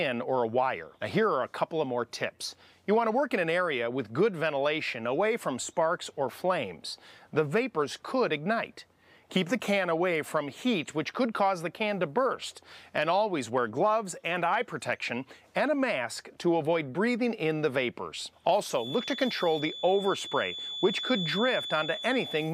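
At 18.69 s a feedback whistle enters and runs to the end of the clip: a thin, steady tone near 3.5 kHz sitting roughly 10 dB under the main sound, its level swelling and fading slowly. The likely cause is a loudspeaker-to-microphone loop held right at the edge of instability, so one frequency keeps ringing without building up. On a spectrogram it shows as a narrow horizontal line at 3.5 kHz.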